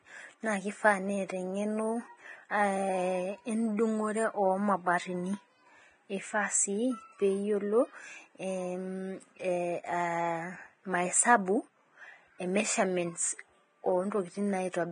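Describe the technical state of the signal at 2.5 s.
At 2.49 to 2.51 s a sharp onset is preceded by about 21 ms of hiss, a pre-echo. The codec spread quantisation noise across the whole transform block, so the quiet gap before the attack fills with it. Unlike reverb or a click, the smear comes before the attack, not after it.

Around it, the speech is hissy and grainy with nothing above 9.7 kHz and heavily roughened treble, pointing to likely Vorbis compression at a low bitrate near 22 kbps. Unlike plain low-pass filtering, the remaining treble is replaced by coarse noise.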